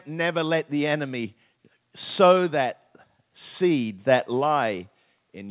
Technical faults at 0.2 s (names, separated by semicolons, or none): none